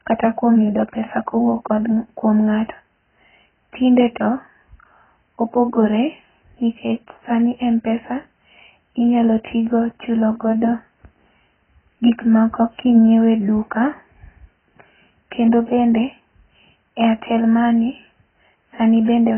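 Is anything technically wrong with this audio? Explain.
Yes. AAC compression damage runs throughout the speech. It is likely from an AAC-LC encode squeezed to a rate that fits roughly 12 kbps. Nothing survives above 3.1 kHz, so the audio sounds dull and muffled, with a heavy warbling, smeared texture on sustained sounds and sibilants.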